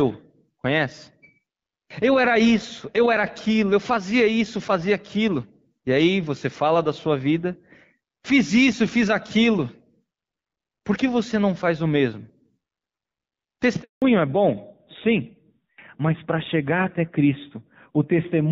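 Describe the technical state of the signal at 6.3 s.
At 6.3 s the speech is intact, carried through the AMR wideband (HD Voice) codec at a rate where it stays clear, with no fault at that point.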